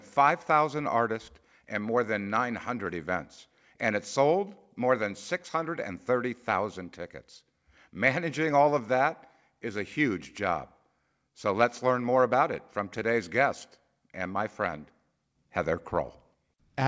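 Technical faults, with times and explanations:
The speech comes through a call path with no technical faults, its content stopping at 8 kHz as the wideband coding of a G.722-style call codec would leave it.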